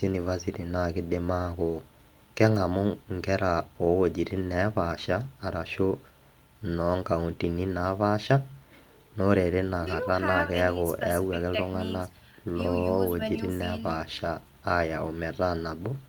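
Nothing in the speech recording stood out as a technical fault on listening.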